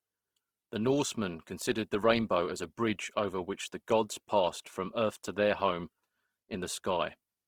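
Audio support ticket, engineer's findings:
Opus compression throughout: speech grainy, rough and noisy across the upper bands, with full bandwidth kept and no muffling. Likely an encoder in CELT mode filling bit-starved bands with noise, consistent with roughly 16 kbps. Grain, not MP3-style swirl or spectral holes.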